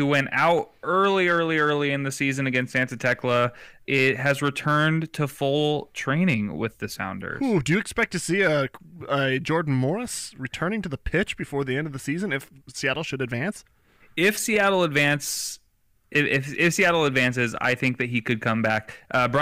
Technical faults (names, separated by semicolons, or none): hard clipping